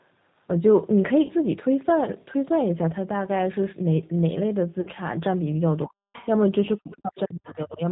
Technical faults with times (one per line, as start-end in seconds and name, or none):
0.00-7.91 G.729 codec
1.22-1.33 VoIP packet loss concealed by the speech codec
4.81-4.89 VoIP packet loss concealed by the speech codec
5.86-6.13 speech suppressed in double talk
6.13-6.27 other side's voice leaking through
6.78-7.82 speech suppressed in double talk
7.44-7.57 other side's voice leaking through